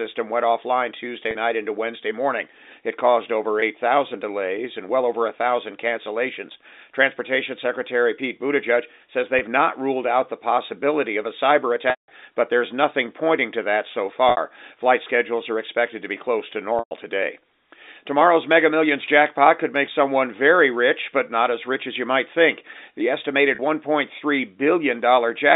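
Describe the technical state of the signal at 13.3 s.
At 13.3 s the audio is intact, with no fault to be heard, only the narrow band of an ordinary G.711 telephone line.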